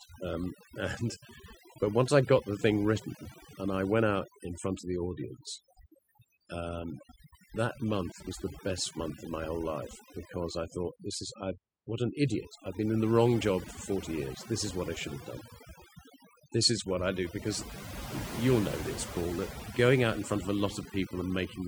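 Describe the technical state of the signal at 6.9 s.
At 6.9 s the background is reduced and breaks up into twinkling specks. This is overdone noise removal, present throughout the clip: an aggressive noise reducer cuts individual frequency bands near its noise estimate, taking quiet parts of the voice with them.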